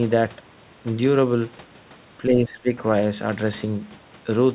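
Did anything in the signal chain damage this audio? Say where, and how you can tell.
Yes. The damage sits in the call processing stage, at the echo canceller. From 2.26 to 2.7 s the speech drops by roughly 15 dB, for a total of about 0.4 s. The level then recovers. This is most likely speech suppressed in double talk. The far end spoke over the talker, and the canceller could not separate the live voice from the loudspeaker echo, so it turned both down. The 4 kHz band limit through the whole clip fits a narrowband G.711 call path.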